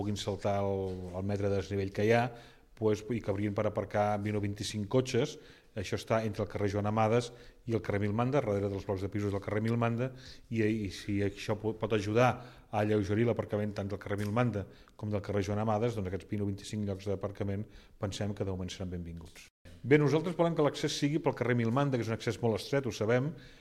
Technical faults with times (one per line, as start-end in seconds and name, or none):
none